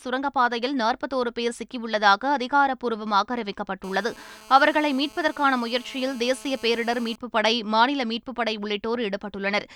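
From 3.84 s to 7.16 s there's classic GSM phone buzz under the speech: a hard, raspy buzz at about 217 Hz, packed with harmonics and completely unrelated to what's being said. A 2G handset close by was pulsing its transmitter at that rate, and the audio circuitry rectified those radio bursts into the signal. It holds steady throughout, as you'd expect from a phone on a call, sitting about 23 dB below the speech.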